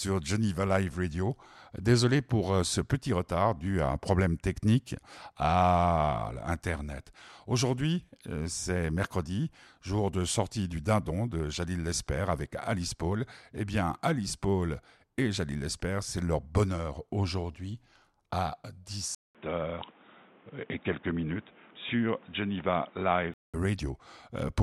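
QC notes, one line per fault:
19.15–23.54 s, input switched to a poorer device: just after "leur bonheur aujourd'hui à", a gap of about 200 ms, then the speech turns boxy with nothing above 3.8 kHz, a new faint hiss and unchanged loudness. The gap and different noise floor, unlike a filter, likely point to a different microphone.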